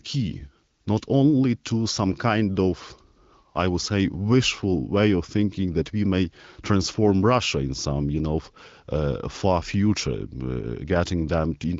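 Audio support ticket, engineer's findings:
No faults found in this speech recording.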